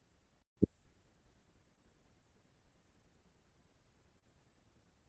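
From 0.40 to 0.57 s, an intermittent contact breaks the signal for about 147 ms. A loose plug or cable connection opens briefly, so the speech drops out with crackle at both edges. Faint hiss remains while the line is open.

Short concealed packet loss occurs at 1.75 to 1.79 s and again at 4.19 to 4.24 s. Each time, about 20 ms of audio failed to arrive, and the receiver filled the gap by extending the preceding sound, for 16 ms and then 30 ms, before blending back. The result is a brief smear or wobble. The speech is band-limited to about 8 kHz, consistent with an Opus call path at a modest bitrate.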